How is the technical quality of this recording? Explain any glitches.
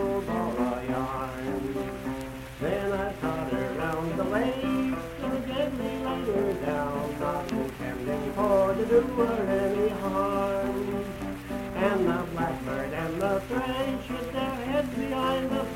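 Nothing here needs explaining, since no glitches turn up anywhere in the recording and its technical quality holds steady all the way through.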